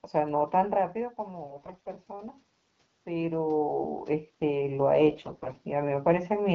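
AMR bit errors appear from 1.46 to 1.88 s and again from 5.08 to 5.56 s. The weakly protected bits of the coded speech frames arrived flipped while the core bits still passed their check, so the excitation pulses landed in the wrong places and the fine pitch, gain and spectral values went astray. The voice holds its rough pitch and level but turns hoarse and gargly, more heavily in the first burst, which sounds like about twice the error rate of the second.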